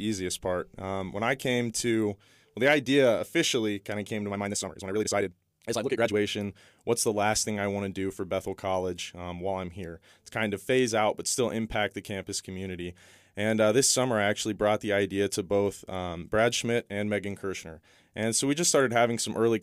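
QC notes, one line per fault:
4.29–6.17 s, time-stretched section: for just under two seconds the speech abruptly runs at nearly double pace, about 1.97 times the surrounding rate, yet its pitch holds steady, so it sounds rushed rather than chipmunk-like. That steady pitch is what separates it from a plain speed-up or varispeed fault, where pitch would rise with tempo. The rushed pace comes from short slices being dropped to squeeze the audio, likely done in software to fit a set duration.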